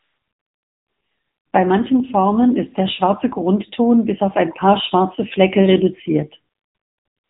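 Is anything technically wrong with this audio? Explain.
Yes. Throughout, the speech carries AMR narrowband mobile codec damage. Low-bitrate vocal-tract coding, fitting roughly 8 kbps, makes it buzzy and synthetic, and a spectrogram shows nothing above 3.8 kHz.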